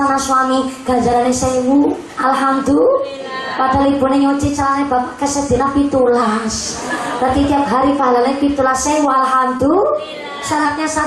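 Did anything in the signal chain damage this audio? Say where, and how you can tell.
Yes. From 6.22 to 6.82 s the sound slows about 6% and sags just over a semitone; from 9.84 to 10.65 s it speeds up and rises a semitone. These are drift correction steps, likely a clock-matching buffer resampling in one jump.

At 9.57 s there is a brief smear where about 20 ms went missing on the network and was filled by extending the preceding sound: short concealed packet loss.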